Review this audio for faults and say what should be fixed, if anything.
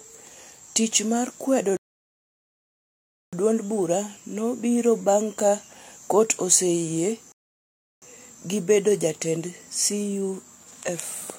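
Rebuffering stalls at 1.77–3.33 s and 7.32–8.02 s: the player ran dry and paused, leaving flat-line waveform gaps and blank spectrogram columns, then resumed without loss. A deeper playback buffer would prevent them.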